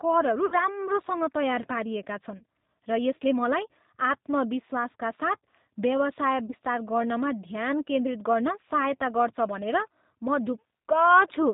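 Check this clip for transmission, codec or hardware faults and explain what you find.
The speech carries G.729 codec damage throughout, and VoIP packet loss concealed by the speech codec interrupts it three times.

The G.729 codec coloring runs the full clip. The sound suggests the 8 kbit/s G.729A variant, rebuilding each 10 ms frame from a vocal tract filter, pitch predictor and sparse pulses. Nothing above 4 kHz survives, and the voice sounds plainly rough and synthetic.

Packet loss concealment occurs at 0.46–0.55 s (about 60 ms lost), at 2.38–2.44 s just after "तयार पारिएका" (30 ms), and at 6.47–6.55 s just before "गर्नमा ध्यान केन्द्रित गर्न" (30 ms). The decoder extends its last pitch and filter with falling gain, producing a fading buzzy tone or coloured noise that stays weakened briefly afterward.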